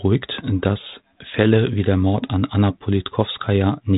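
Speech with no technical faults to report.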